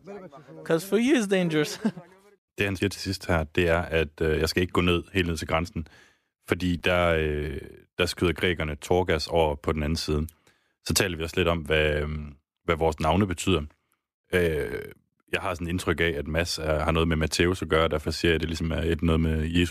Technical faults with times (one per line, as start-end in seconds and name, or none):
6.79 chunks out of order